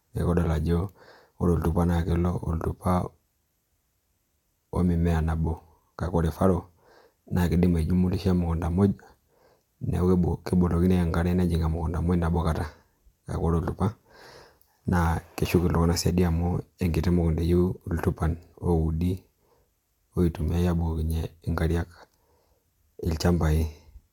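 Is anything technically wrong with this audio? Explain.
Yes. At 11.78 s there is a single sharp click, most likely from dropped samples: a fraction of a millisecond of the speech stream goes missing, so the waveform jumps abruptly to a later value. The waveform shows a step discontinuity, and the spectrogram a thin vertical line spanning all frequencies.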